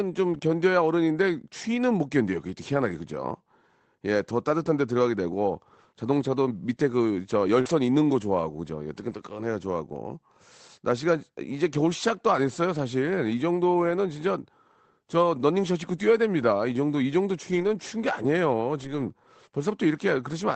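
At 0.33 s a packet was lost, and the decoder rebuilt about 20 ms from the low-bitrate copy carried in the next packet. This lost packet rebuilt from error correction has no gap but briefly sounds rougher and noisier. Right after, from 0.37 to 0.41 s, a short concealed packet loss follows: about 20 ms never arrived in time, so the receiver extended the preceding sound, giving a quick smear or wobble. At 7.61 to 7.67 s another concealed loss fills about 40 ms the same way, and from 7.65 to 7.71 s a further 40 ms is rebuilt from error correction, so that stretch wobbles and then turns grainy. The same rebuilt-frame roughness returns at 9.05 to 9.15 s (about 60 ms), 17.51 to 17.69 s (about 100 ms) and 18.79 to 19.09 s (about 160 ms).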